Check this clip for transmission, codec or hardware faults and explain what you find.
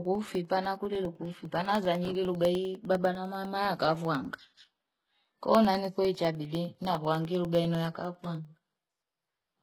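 Two faults show up in this speech clip.

Throughout, the treble sounds gritty and synthetic, with nothing above 12.3 kHz, likely from HE-AAC compression at a low bitrate around 16 kbps. The rebuilt high band doesn't match the real harmonics.

From 0.05 s to 9.55 s, there are periodic USB or driver dropouts: roughly a millisecond of silence every 0.1 s. That gives a steady, regular ticking while the speech is running.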